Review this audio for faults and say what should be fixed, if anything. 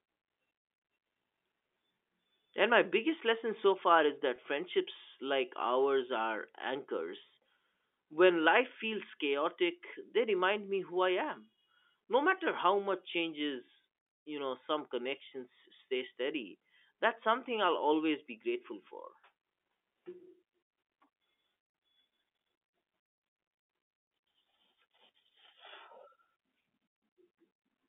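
Two brief dropouts show packet loss with pitch repetition, at 4.36 to 4.38 s and at 13.66 to 13.68 s. Each gap is 20 ms, which fits a single lost packet. The receiver bridged each hole by repeating the last pitch period. Because the gaps are short, each sounds like a slightly held, buzzy blip rather than silence. The G.711 telephone band around it stays intact. To prevent it, add jitter buffering or forward error correction on the network path.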